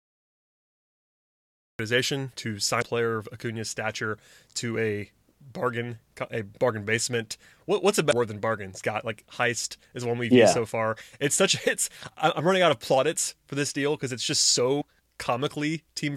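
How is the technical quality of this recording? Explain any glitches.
The speech recording has two kinds of fault: a truncated opening and three brief decoding glitches.

Cut-off start: The file holds digital silence until 1.79 s, where the speech enters abruptly mid-sound with no natural attack. Capture or streaming began late, so the start of that sound was never recorded and the waveform jumps straight in.

Damaged data in a compressed stream: Short blips occur at 2.78–2.83 s, just before "player of"; at 8.09–8.13 s, between "what's a" and "than bargain"; and at 14.80–14.82 s. Corrupted bytes caused the decoder to misread frames and resynchronise, producing each brief glitch.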